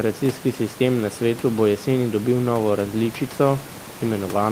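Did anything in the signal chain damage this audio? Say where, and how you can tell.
No, nothing in the signal chain has damaged this speech recording. What remains audible is the room's own background noise, sitting about 19 dB below the speech, which belongs to the recording space rather than to any stage of the system.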